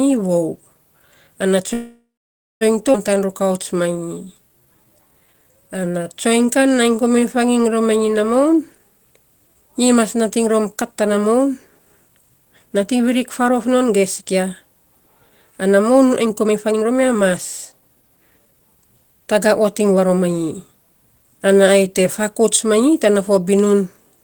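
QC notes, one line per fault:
1.73–2.63 s, call audio freeze: the sound stalls for about 0.88 s, trailing into 0.56 s of silence, then resumes where it stopped. This is likely a jitter buffer run dry by late packets.
2.93–2.96 s, skip ahead: playback jumps forward with only a tiny join. About half a second of audio was discarded while later packets were already queued.
3.14–7.52 s, jitter buffer slow-down: speech runs at 87% speed with unchanged pitch. Repeated pitch periods added 572 ms to rebuild a low buffer.
8.45–14.23 s, 16.25–17.30 s (right after "ana moun ai"), 17.72–18.61 s, jitter buffer speed-up: speech is hurried at 108%, 126% and 113% speed with pitch held. Trimmed pitch periods removed roughly 0.5 s, 0.3 s and 0.1 s of surplus delay.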